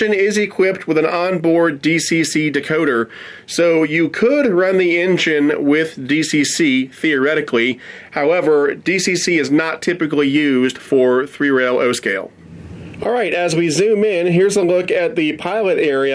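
No dropouts, clicks, level jumps or other transport faults are audible anywhere in the audio.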